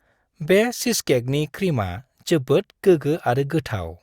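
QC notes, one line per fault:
No faults heard anywhere in this recording.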